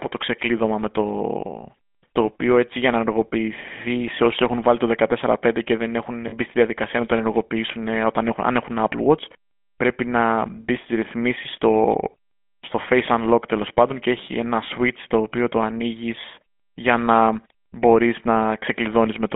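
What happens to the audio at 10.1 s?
Nothing sudden happens at 10.1 s. That moment just carries the same GSM full-rate codec sound that runs through the whole clip. The speech passes through a band of roughly 200 Hz to 3.5 kHz, so it's thin and has no top end. The codec models the vocal tract and rebuilds the excitation from a sparse, regular pulse train, which gives the voice a plainly audible buzzy, gravelly roughness. That fits a 13 kbps link.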